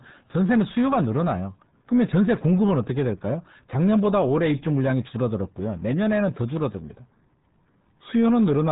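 From start to finish the speech is squeezed through the RealAudio 14.4 codec, the old RealAudio 1 format at 8 kbit/s. Nothing above 3.8 kHz survives. The coding damage is heavy. Consonants lose their edge, and the voice comes out muffled and gargly.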